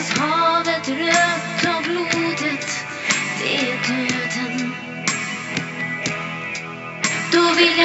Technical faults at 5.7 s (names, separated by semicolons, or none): none